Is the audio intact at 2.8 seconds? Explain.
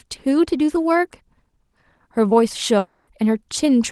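No. From 2.78 to 3.08 s the sound stops being real speech and turns into a buzzy, hiss-like continuation of the last moment that fades across the whole 0.29 s gap without reaching true silence, then the speech resumes with that stretch simply gone. This is likely a long network dropout: no packets reached the receiver, so its concealment kept extending the final sound to cover the hole, and the missing audio was never recovered.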